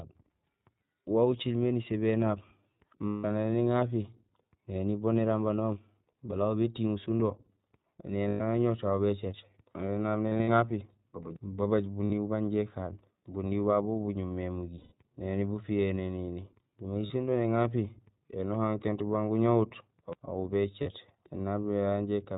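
The whole recording has passed through the iLBC codec, in what sounds like its 15.2 kbps, 20 ms frame mode. Nothing above 4 kHz survives, and each frame's excitation is coded independently; the speech carries a plainly audible rough, synthetic edge.

Lost iLBC frames break in at 3.08 s (160 ms), 8.28 s (120 ms), 10.28 s (140 ms spread over 200 ms, longest gap around 70 ms), 12.04 s (60 ms), 14.78 s (140 ms), 17.06 s (40 ms) and 20.82 s (40 ms). The decoder repeats the last pitch cycle mixed with noise, giving a held, buzzy vowel, and the voice is right again almost at once.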